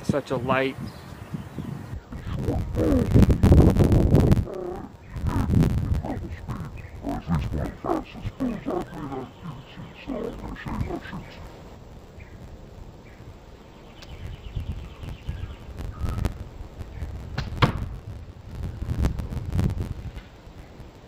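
Interleaved audio read as planar begins at 1.94 s and runs to the end. Each block of alternating left and right samples is split in two: the first half goes to the left channel, the second to the right, so each channel gets a mix of both sides played at half speed. The blocks last about 11.6 ms, which fits a 512-sample block. That is too short for an octave drop, so the sound turns dull and robotic, with a buzz at 86.1 Hz.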